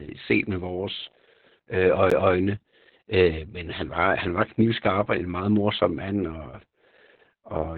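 Speech runs through heavy Opus voice compression for its whole length. Nothing is left above about 4.4 kHz, so the sound is narrowband, muffled and hoarse. The coarse, slightly robotic texture points to SILK coding at roughly 8 kbps. A CD skip comes at 2.10 s, right after "set med vores øh". A very brief mute is heard, and then playback resumes from a different place. A knock or a disc flaw made the laser jump tracks.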